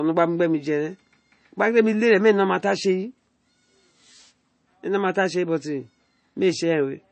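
Throughout the speech, the sound is watery and swirly, with chirpy, metallic sibilants and nothing above about 8.3 kHz. This is likely MP3 compression at a starved bitrate, which fits roughly 32 kbps: the encoder cuts the treble and drops weak frequency lines that flicker between frames.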